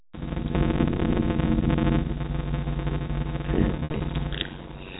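Speech recorded through a block size mismatch (padded) runs throughout: each block ends in an inserted gap, producing a steady buzz near 92 Hz and playback at about 0.53 times normal speed, which fits 256-sample blocks being read into a larger frame. From 3.76 to 4.00 s, packet loss with pitch repetition removes about 140 ms of audio scattered across 240 ms, the longest gap being 60 ms. These gaps are bridged by repeated pitch periods heard as brief buzzy holds. The band-limited telephone sound of the G.711 A-law coding is audible underneath.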